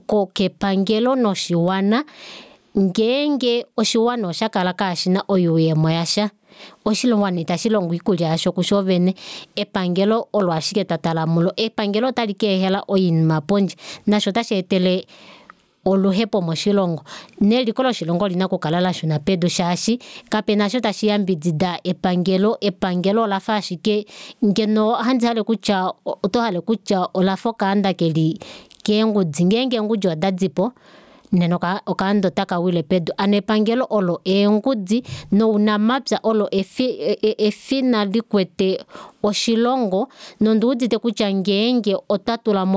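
Throughout, gain pumping: the gain swings around 20 dB, pulled down under loud speech, likely an over-driven fast limiter.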